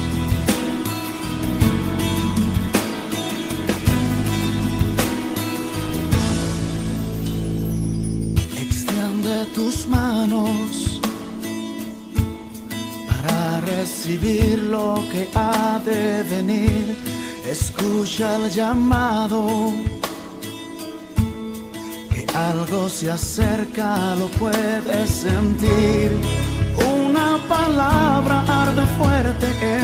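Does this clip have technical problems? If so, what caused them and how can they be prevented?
Yes. At 8.44 s there is a skip ahead: roughly 0.7 s of audio was discarded, likely because the jitter buffer overflowed, and playback jumps straight to later sound with no gap. A waveform or spectrogram shows an abrupt seam where the two sides meet. A larger buffer ceiling would prevent it.

From 8.68 to 10.14 s a jitter buffer speed-up plays the audio about 6% fast at unchanged pitch while roughly a tenth of a second is trimmed away in small pitch-period pieces. A spectrogram shows harmonics at normal height but events slightly compressed in time. Gradual, smaller buffer corrections would avoid this hurried stretch.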